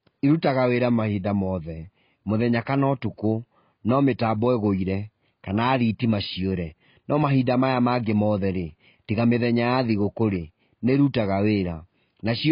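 Speech sounds dull and muffled throughout, with nothing above about 5 kHz and a warbling, smeared texture on sibilants and held sounds. The likely cause is heavy AAC compression, consistent with AAC-LC at a very low bitrate around 16 kbps, which lowers the cut-off and coarsely quantises what remains.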